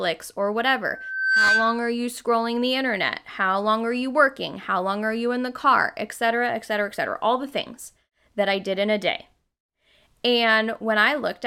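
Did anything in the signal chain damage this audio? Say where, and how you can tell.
Yes. The acoustic and analogue stage closed into a loop: a microphone picked up the loudspeaker it was feeding, and at one frequency the round-trip gain rose above unity. The result is loudspeaker feedback squeal from 0.9 to 1.93 s, a steady 1.6 kHz tone that swells over about half a second until it sits roughly 5 dB above the speech. The tone then stops at 1.93 s, which shows the loop was broken there.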